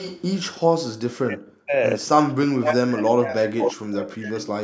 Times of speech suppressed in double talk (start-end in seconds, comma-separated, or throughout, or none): 1.26-1.76, 2.36-3.84, 4.11-4.47